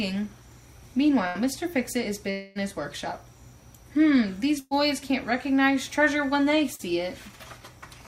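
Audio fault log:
1.27–1.38 s and 4.59–4.74 s, burst of packet loss: a run of packets went missing, about 80 ms the first time and 120 ms the second. The receiver stretched the last sound into a fading buzz or hiss to cover each hole, and the audio picks up further on with that stretch gone.
2.31–2.58 s, long network dropout: a held, fading buzz or hiss fills roughly a quarter of a second, never quite reaching silence, and then the audio jumps ahead with about 240 ms skipped. This is likely a longer break in delivery, with the receiver covering the whole gap.
6.75–6.82 s, short concealed packet loss: about 40 ms never reached the decoder in time. The receiver carried the previous sound forward and blended it back in, so you hear a brief smear or wobble rather than a clean gap.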